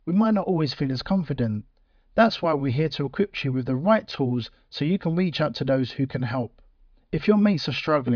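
Listening through this speech recording, nothing stood out as a technical problem at any point.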